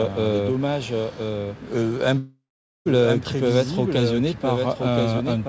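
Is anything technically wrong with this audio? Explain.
Yes, there are two faults.

A doubled audio track runs throughout. The audio was likely captured twice, with a second path lagging about a second behind. A full-band copy, roughly 5 dB quieter and with no room colour, trails the original as a clean, flat repeat.

A long network dropout occurs from 2.18 to 2.87 s, likely a stall in the call's packet stream. The receiver stretches the last sound into a fading buzz, leaving about half a second of silence. The audio then resumes with 680 ms missing. Throughout, the call codec leaves nothing above 8 kHz.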